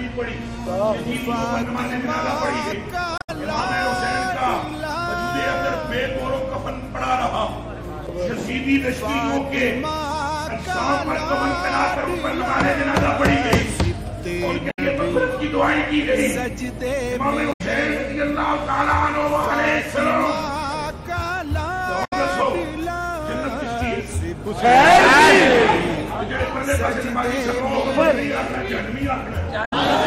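Brief glitches from damaged data in a compressed stream sit at 3.18 to 3.30 s, 14.70 to 14.79 s, 17.52 to 17.61 s, 22.04 to 22.13 s and 29.64 to 29.73 s. Each is a roughly 0.1 s glitch where corrupted frames are misdecoded.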